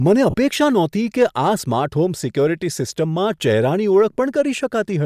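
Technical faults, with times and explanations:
0.30–0.34 s, lost LE Audio frames: a 40 ms gap just before "નહોતી કે", filled by the likely LC3 decoder with the last spectrum at random signs, so it sounds like a brief noisy smear. On a spectrogram the harmonics blur into a grainy patch, which fits four missing 10 ms frames.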